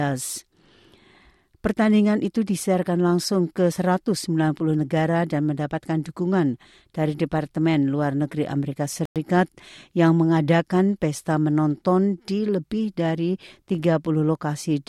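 At 9.05 to 9.16 s the speech drops to total silence for about 104 ms, then resumes: a Bluetooth stall, likely from interference delaying packets until the headphones' buffer emptied. The waveform shows a flat gap, and the spectrogram a clean vertical blank band.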